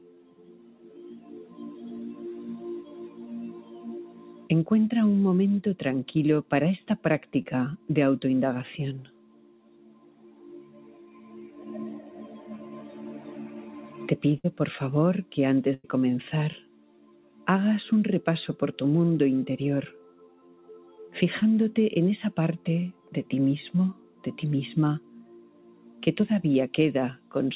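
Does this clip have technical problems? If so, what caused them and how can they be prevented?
Yes. A noise suppressor built for speech is applied to this sound throughout. It treats steady tones and tails as noise, so the level swings by roughly 10 dB as it clamps down and releases. Attacks get through while sustained parts pump and thin. Prevention: disable the speech noise suppressor for music or general sound.

The sound is cut by the noise suppressor at 0.00–1.59 s, 2.84–4.49 s, 6.43–7.89 s, 9.05–12.48 s, 16.60–17.47 s, 20.10–20.99 s, 22.93–26.02 s and 27.17–27.32 s. Each time it drops by up to about 8 dB. Held and decaying parts sink most. Prevention: switch the suppressor off or set it to a music mode.

Short concealed packet loss occurs at 7.42–7.46 s and 21.40–21.44 s. About 20 ms of audio never arrived in each case. The receiver stretched the previous sound to cover the hole, which gives a brief smear or wobble. 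Prevention: use a steadier network connection or a larger jitter buffer.

A burst of packet loss occurs at 14.38–14.46 s, losing about 60 ms, and at 15.74–15.86 s, losing about 100 ms. The receiver held the last sound and faded it, so you hear a buzz or hiss. Playback then jumps ahead past the missing audio. Prevention: fix the network congestion or add forward error correction.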